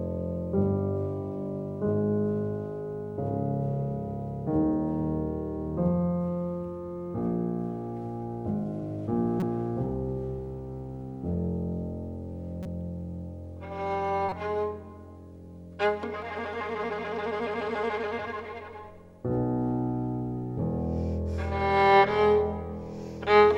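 At 9.40 to 9.43 s there is a corrupt frame decoded. The decoder played a damaged compressed frame. Its misread codes or wrong gains put energy at the wrong frequencies. The result is a brief chirp, squeak, blip or noise burst that does not belong to the sound. The same fault returns at 12.63 to 12.66 s and at 14.29 to 14.32 s. The first event is the loudest, with error energy near -15 dBFS. The second, near -25 dBFS, is the quietest.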